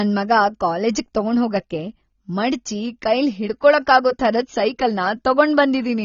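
Throughout, the speech sounds dull and smeared, with nothing above 7 kHz and fizzy, warbling sibilants, likely AAC compression at a bitrate around 24 kbps.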